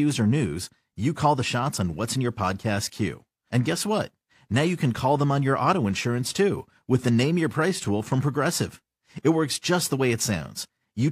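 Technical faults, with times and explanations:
No technical faults detected.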